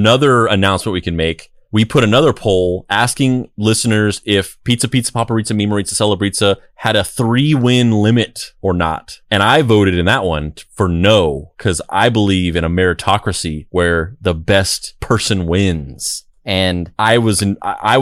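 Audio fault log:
15.75 to 17.09 s, drift correction step: the speech suddenly runs about 6 percent fast, and its pitch rises by a full semitone (100 cents) along with it. Because speed and pitch move together, the shift sounds like a brief change in tape speed rather than a pitch effect. After roughly 1.3 s it snaps back. The likely cause is clock-matching software that jumped the playback rate in one step to bring its buffer back to target.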